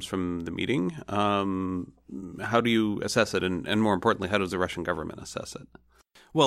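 No technical faults can be heard anywhere in this speech recording.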